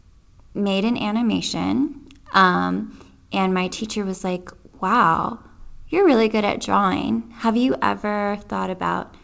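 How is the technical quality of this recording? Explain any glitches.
No glitches turn up anywhere in the recording; it is speech carried over a call connection, and its audio band stops at 8 kHz, which fits a wideband call codec such as G.722.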